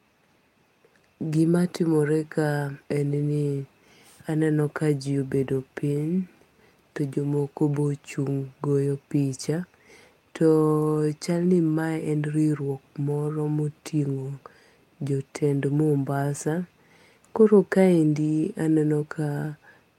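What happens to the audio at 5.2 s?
Nothing goes wrong at 5.2 s; the speech carries on intact through that moment with no fault to be heard.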